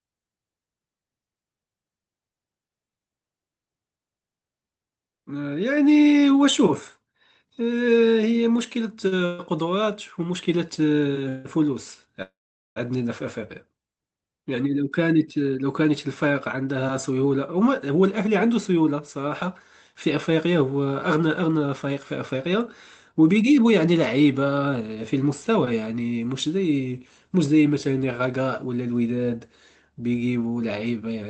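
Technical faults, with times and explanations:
9.07 to 9.14 s, short stall from a late packet: one packet came late and the jitter buffer emptied, so the last sound was held for about 42 ms with a faint buzz, then resumed from the same point. Unlike a freeze, it is a brief stretch, not a fading gap.
9.26 to 9.41 s, 11.29 to 11.47 s and 12.22 to 12.78 s, call audio freeze: the sound stops moving forward for 131 ms, 160 ms and 540 ms, likely because packets were held up and the jitter buffer ran dry. The last sound continues as a fading buzz, and in the longest one it gives way to about 440 ms of silence before the audio picks up where it stopped, with nothing lost.
15.38 to 25.61 s and 28.40 to 28.81 s, jitter buffer speed-up: after the delay built up by the stalls, the receiver cut many tiny pitch-period pieces to catch up, running the speech about 6% fast over roughly 0.7 s removed, then briefly 8% fast. 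The pitch stays the same, so it sounds hurried rather than higher.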